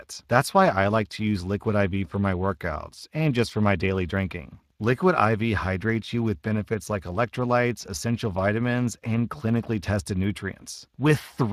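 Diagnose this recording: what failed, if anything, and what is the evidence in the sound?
Codec stage: Speex coding runs through the whole speech clip, leaving plainly audible hoarse, noisy grain on the voice and nothing above 15.3 kHz, which fits a setting near 22 kbps. Its CELP excitation is short of bits, so unlike transform-codec swirl, the roughness tracks the voice.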